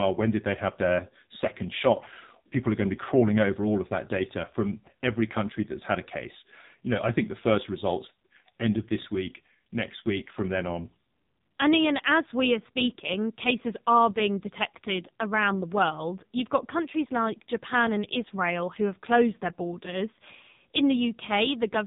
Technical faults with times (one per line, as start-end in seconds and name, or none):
0.00-21.87 AMR narrowband mobile codec